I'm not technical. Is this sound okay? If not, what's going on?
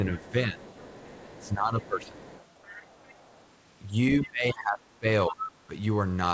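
No. This is speech from a call, and two things go wrong.

First, speech suppressed in double talk. The talker's voice dips and gets muffled from 0.09 to 0.6 s, from 1.42 to 2.17 s, from 4.24 to 5.06 s, and from 5.28 to 5.48 s. The drop is deepest in the stretch from 4.24 s. The likely cause is both people talking at once. The call's echo remover could not tell the talker apart from the other side, so it turned everything down.

Second, the other side's voice leaking through. A faint second voice can be heard from 0.18 to 0.31 s, from 0.6 to 1.49 s, and from 2.02 to 3.5 s. It comes back, noticeably louder, from 5.45 to 5.52 s. This is likely the other person coming out of the talker's loudspeaker and being picked up again by the microphone. The echo remover did not clear it all away.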